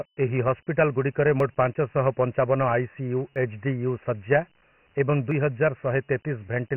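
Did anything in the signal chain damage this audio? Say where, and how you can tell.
Yes. Dialogic VOX ADPCM damage runs through the whole speech clip, at the codec stage. Nothing reaches above 3 kHz, which fits a 6,000-sample-per-second VOX file at about 24 kbps, with 4 bits per sample. The coder stores only the step between successive samples, so with so few bits it keeps guessing the signal's size and misses. That leaves a heavy gritty hiss that follows the speech.

Audio missing between chunks is heard at 1.40 s, 3.36 s and 5.31 s, where a short piece of the speech, roughly 40 ms, drops out. The two sides are butted together with no gap of silence. The skips recur at a steady spacing of about 2 s, so the likely cause is a recorder or processor in the driver or buffer stage handling audio in 2 s chunks and dropping samples each time it closes one chunk and opens the next.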